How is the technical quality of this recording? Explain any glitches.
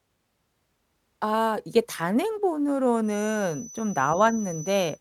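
There's one real problem here: a feedback whistle that comes in at 3.01 s and runs to the end of the clip. It's a thin, steady tone at 6 kHz, sitting roughly 20 dB under the speech and swelling and fading slowly in level. The likely cause is a loudspeaker-to-microphone loop hovering right at the edge of feedback, so that single frequency keeps ringing without building up into a full howl.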